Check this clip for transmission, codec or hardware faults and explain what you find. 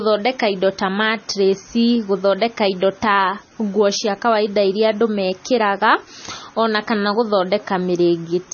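One fault runs throughout: MP3 compression, likely at a low bitrate around 24 kbps. Everything above 6.6 kHz is gone, and weak frequency lines flicker between frames, so the speech sounds watery and swirly with chirpy s sounds. Simple low-pass filtering would dull it without swirling.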